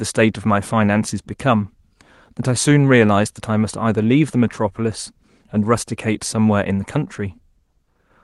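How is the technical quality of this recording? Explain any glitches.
No glitches; the speech comes through a call codec.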